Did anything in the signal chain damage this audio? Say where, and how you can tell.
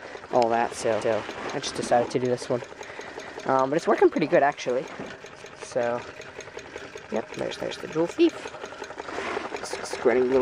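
Yes, overlapping chunks at the buffer stage. At 1.01–1.22, 3.22–3.42, 5.42–5.62 and 7.61–7.82 s, a 200 ms piece plays twice. Each 2 s chunk starts before the last one ended, so sound repeats at every join instead of dropping out.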